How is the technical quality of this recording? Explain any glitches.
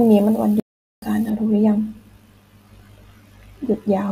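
Two faults affect the recording: a dropout early on and a dulled tonal balance for most of its length.

Playback stall, 0.60 to 1.02 s: the speech cuts to silence for about 424 ms, then resumes, most likely because the player's buffer ran dry or its thread blocked.

De-emphasis applied wrongly, 1.3 s to the end: a treble cut slopes down about 14 dB at 10 kHz relative to 1 kHz, leaving the speech muffled and dull.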